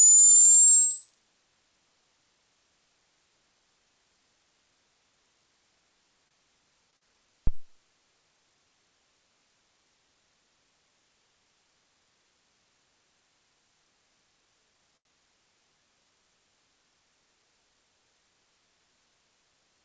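At 6.28 to 6.34 s and 6.91 to 6.96 s come short stalls from late packets. The jitter buffer ran dry, so the last sound was held for 28 and 20 ms, showing as frozen, smeared spectrogram columns.

Right after, at 6.97 to 7.04 s, a short concealed packet loss replaces 40 ms with extrapolated sound, heard as a brief smear. It appears as blurred, flattened texture against the 8 kHz ceiling of the G.722 call path.

At 7.47 s a phantom power thump follows. A supply switching on or off on the live input pushed a step through the coupling capacitors, giving a deep thud decaying in about 49 ms, seen as a large low-frequency waveform swing.

At 14.97 to 15.08 s another late-packet stall holds the sound for 82 ms, audible as a sound held too long and visible as a stretched, repeated spectrogram band.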